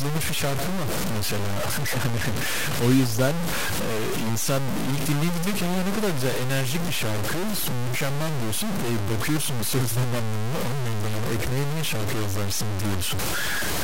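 From start to finish the speech is heavily grainy, with a gritty distortion that tracks every syllable and noise sitting roughly level with the signal. Quiet tails sputter or drop out. That's likely low bit depth without dither, truncated to about 3 bits.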